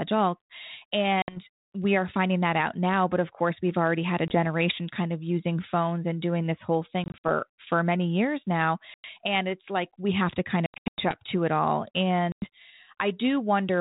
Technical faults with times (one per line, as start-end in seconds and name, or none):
1.22-1.39 packet loss on an ADPCM call
4.28-4.35 packet loss on an ADPCM call
7.04-7.25 packet loss on an ADPCM call
8.94-9.05 packet loss on an ADPCM call
10.66-11.17 packet loss on an ADPCM call
12.32-12.47 packet loss on an ADPCM call